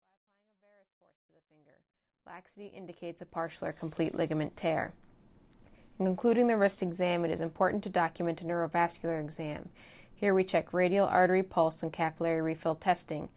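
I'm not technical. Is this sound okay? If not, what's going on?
Yes, nothing is wrong: the sound rises gently from silence over the first 4 seconds as an intentional fade-in, and its narrow, phone-call quality, with nothing above 4 kHz, is normal for a call passed through the G.711 mu-law codec.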